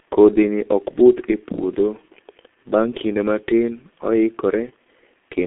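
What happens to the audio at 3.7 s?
G.723.1 codec damage is present at 3.7 s and across the whole clip, not just that moment. The speech is packed into 30 ms frames with a slowly updated voice model, and the heavy coding loss fits a stream of about 6.3 kbit/s. The band is held to roughly 250 Hz–3.4 kHz, with nothing above 3.8 kHz, so the speech sounds muffled and hoarse and its consonants blur together.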